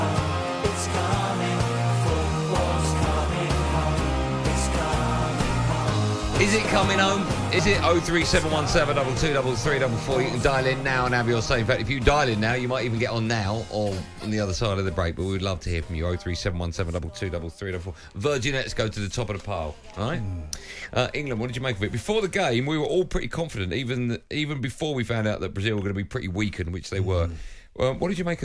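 No technical faults are audible.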